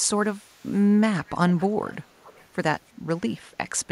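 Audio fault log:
0.25–0.85 s, 1.24–1.33 s, 1.5–1.65 s, 1.88–1.95 s and 2.21–2.45 s, echo leak: a faint copy of the speech trails the original by 330 ms, so you get short ghostly scraps behind it. The first stretch is very low, around 35 dB down. The later ones are stronger, around 25 to 30 dB down. Likely cause: a loudspeaker on the far end whose echo canceller let some of its own playback back into the mic and sent it back up the line.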